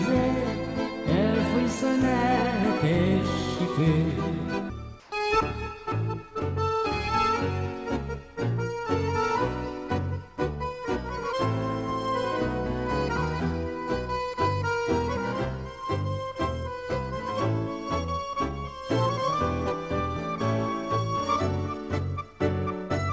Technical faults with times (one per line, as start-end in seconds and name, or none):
5.00-5.12 comfort noise in place of the background